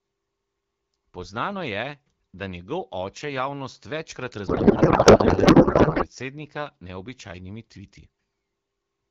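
A codec payload misread runs from 4.47 to 6.07 s, starting right after "oče javnost večkrat". The AMR frames were packed octet-aligned but decoded as bandwidth-efficient, so every field sits a few bits off and the decoder builds speech from the wrong parameters. For those 1.6 s the speech gives way to garbled noise and warble that barely tracks it. Around the fault, the AMR wideband (HD Voice) codec shows only light coding damage.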